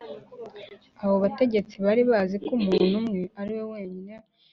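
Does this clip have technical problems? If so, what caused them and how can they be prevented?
No, this speech clip has no technical problems.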